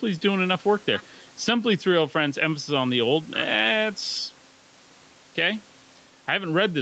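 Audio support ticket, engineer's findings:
Gain pumping, throughout the speech. Level swing around 5 dB. Likely cause: input gain set far too high, with a fast limiter or compressor clamping every peak. Dynamics squashed, loud and soft passages pulled close together. Call path bandwidth audible at 8 kHz.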